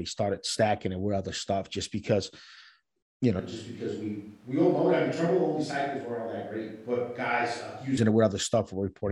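From 3.40 to 7.97 s the speech turns hollow, roomy and thin, roughly 10 dB quieter with more background noise, likely a switch to a distant microphone.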